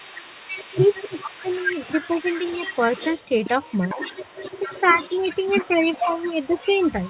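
From the very start to the end of the speech, a faint second copy of the talker trails the original by about 0.45 s, sitting roughly 15 dB below it. This is an echo leak: the far end most likely played the call over a loudspeaker, and its echo canceller let part of what its microphone picked up travel back. The audio is band-limited to nothing above 4 kHz, consistent with a G.711 telephone codec.

Between 0.79 and 1.5 s the talker's level sags hard, by as much as 20 dB, for roughly 400 ms in total. Further dips follow at 3.94 to 4.01 s (around 10 dB), 4.6 to 5.24 s, and 5.72 to 6.8 s, the last two shallow at about 5 dB. This is speech suppressed in double talk, likely from the echo canceller misreading overlapping voices as echo and ducking the talker along with it.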